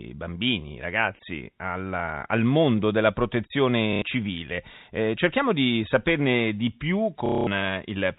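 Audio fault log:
3.93 to 4.02 s, packet loss with last packet repeated: About 90 ms of sound drops out. The receiver fills the gap by replaying the last packet it got. The result is a brief robotic stutter, and its rhythm fits 30 ms packets.
7.26 to 7.47 s, packet loss with last packet repeated: A longer run of about 210 ms is filled the same way. The repeated chunk buzzes at roughly 33 Hz, which fits 30 ms packets.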